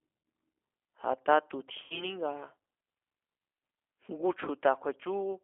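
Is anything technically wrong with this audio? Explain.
Yes, two faults can be heard.

Throughout, the speech carries G.729 codec damage, and it is plainly audible. The band is confined to roughly 300 Hz to 3.4 kHz, and the voice has a rough, slightly synthetic grain. The decoder rebuilds each 10 ms frame from a vocal tract filter, a pitch predictor and a few pulses rather than the real waveform, which points to an 8 kbit/s speech coder. Simple low-pass filtering would leave the voice smooth. This grain is what sets the codec apart from plain band-limiting.

From 1.84 to 2.13 s there is VoIP packet loss concealed by the speech codec. About 60 ms of audio is missing, which fits three 20 ms packets. The decoder fills the gap by repeating its last pitch and filter at falling gain, so the voice is stretched into a fading sound instead of falling silent. Because each frame builds on the one before, the voice stays weak or distorted after the loss ends, until about 2.13 s. 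That lingering recovery separates it from a hard dropout or a click.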